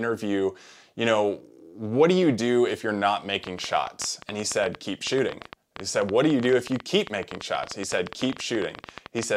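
From 3.44 s, just after "do if you're not", a train of clicks runs until 9.24 s: around seventy near-identical pulses at about 11.9 per second, spaced unevenly, peaking about 10 dB above the speech. The likely cause is electrical interference or a faulty connection injecting pulses. Unlike clipping crackle, which follows loud peaks, these ticks keep the same shape and carry on through pauses, independent of the speech.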